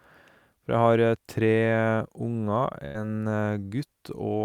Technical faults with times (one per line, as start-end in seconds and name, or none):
2.85-2.97 burst of packet loss